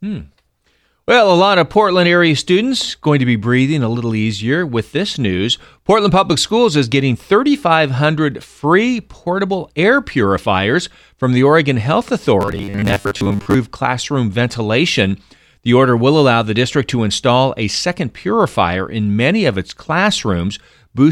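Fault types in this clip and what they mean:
Robotic sound from repeated short buffers: from 12.41 to 13.54 s, just before "classroom ventilation", the speech becomes a rigid metallic buzz at 100 Hz, which fits a 10 ms snippet being looped, likely because audio arrived too seldom, so most real signal was skipped.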